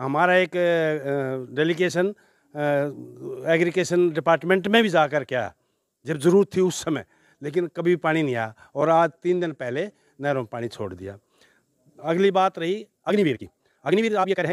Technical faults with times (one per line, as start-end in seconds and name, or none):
8.92-10.06 Bluetooth SBC bit pool drop
12.95-14.52 time-stretched section